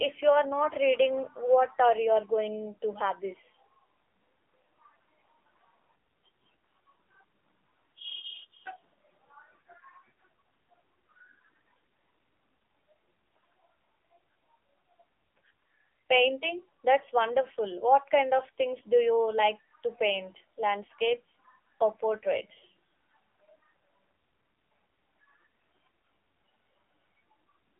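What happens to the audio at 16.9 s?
At 16.9 s the audio is still under the AMR narrowband mobile codec that runs through the whole clip. A vocal-tract model rebuilt from sparse pulses makes it buzzy and synthetic, fitting roughly 7.4 kbps. A spectrogram shows nothing above 3.7 kHz, with the band mostly within 300 Hz to 3.5 kHz.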